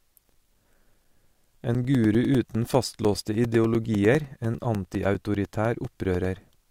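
A steady train of small ticks runs under the speech from 0.14 s to 6.65 s, ten per second, audible only where there is signal. These are periodic USB or driver dropouts: something blocked the audio path every 0.1 s, and each time a few milliseconds of sound were lost and replaced with silence. Those regularly spaced gaps cut the waveform abruptly, and each cut produces the click.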